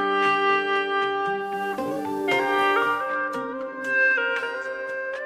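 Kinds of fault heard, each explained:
Digital radio blending to analogue: the receiver lost its digital stream at 1.36 s and cross-faded over 266 ms to the station's FM broadcast, returning to digital at about 3.17 s. While the FM signal carries the sound, a steady hiss rises to roughly 30 dB below the programme and the level shifts by about 2 dB, so that stretch sounds noisier and slightly different in loudness from the audio around it.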